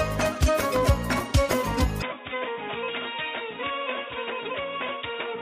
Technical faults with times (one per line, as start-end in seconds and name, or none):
0.76-0.78 loud pop
2.02-5.42 input switched to a poorer device